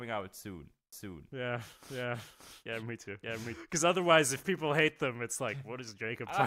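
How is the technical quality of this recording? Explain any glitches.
The recording has one clear fault, a doubled audio track. From 0.93 s to 3.55 s, starting right after "out soon", the speech plays twice: a second, full-band copy trails about half a second behind at roughly the same loudness, with no decay or room colour. This is likely a second capture through a slower path. On a waveform and spectrogram, the speech patterns repeat at a fixed offset and overlap, and the copy starts and stops abruptly.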